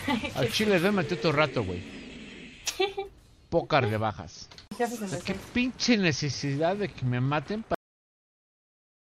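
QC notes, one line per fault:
7.75 s, cut-off end: the sound just stops mid-event and sits in dead digital silence for the last 1.3 seconds or so. There's no decay or tail at all, because the final buffers never got written out, so playback had nothing left to play.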